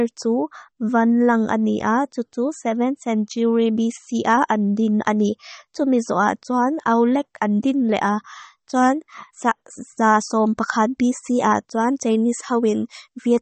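Throughout the speech, nothing is heard above 8.4 kHz, and the s sounds turn watery and chirpy. Consonant attacks smear. The likely cause is MP3 compression at a low rate, plausibly near 32 kbps. The starved encoder cut the treble and dropped weak frequency detail frame by frame.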